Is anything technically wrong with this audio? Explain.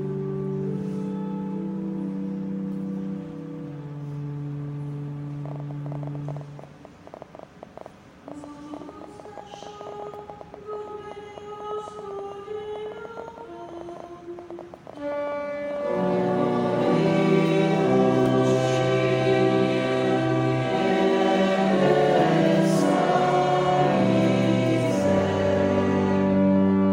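Yes. A train of clicks runs from 5.46 s to 26.86 s, around 200 of them at about 10.5 per second, spaced irregularly rather than on a steady beat. Each click has nearly the same shape, which points to one repeating source, likely electrical interference from nearby equipment or a faulty connection or power supply. The pulses peak a few decibels above the programme level, so they sound like sharp ticking and popping over the sound and through the pauses.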